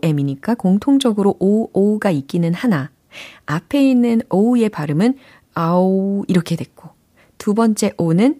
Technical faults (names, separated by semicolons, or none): none